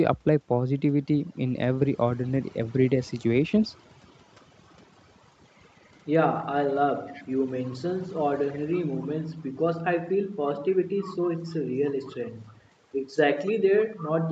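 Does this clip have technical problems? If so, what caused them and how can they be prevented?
Yes. Overdone noise removal runs through the whole clip: the suppressor pushes individual frequency bands down whenever they sit near its noise estimate, so the background drops and breaks up into twinkling specks, and the quieter parts of the speech vanish along with it. Setting the noise reduction to a gentler strength, or recording in a quieter room so less is needed, would prevent this.

Echo leak appears from 2.26 to 5.15 s, 5.68 to 5.91 s, 7.06 to 9.42 s, 10.44 to 12.53 s and 13.45 s to the end. A faint copy of the speech trails it by 289 ms, weakest near the start at about 35 to 40 dB down and rising to about 20 dB below the speech later on. This is likely a loudspeaker on one end whose echo canceller let some of the playback back into the microphone. Using a headset on that end, or improving its echo cancellation, would prevent it.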